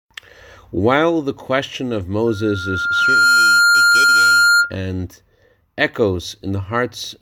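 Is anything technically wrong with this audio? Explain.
Yes. From 2.27 to 4.73 s, right after "the question of", a tone near 1.4 kHz swells over about a second into a squeal roughly 10 dB above the speech. This is loudspeaker feedback squeal: the microphone picks up its own loudspeaker, and at that frequency the loop gain exceeds one, so the tone keeps growing.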